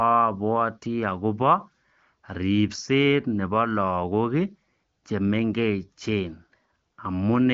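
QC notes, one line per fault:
No faults found; the speech sits in an AMR wideband (HD Voice) channel with nothing above about 6.9 kHz and little or no audible codec damage, which fits one of the codec's higher bitrates.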